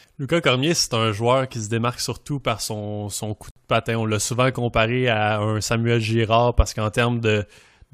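At 3.51 s there is a gap between stream segments: the timestamps of two consecutive pieces of the stream fail to meet, and the player fills the hole with digital silence instead of audio. Right after "par son son coup" the speech stops dead for about 55 ms, until 3.56 s, then resumes cleanly with "de patin". Both edges are abrupt, and nothing is cut from the speech. The pause just adds a short unnatural hiccup to the timing.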